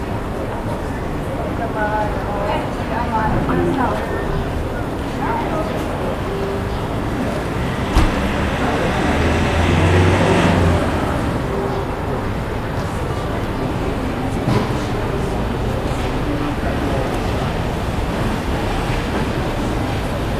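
Sound recording; no technical faults detected.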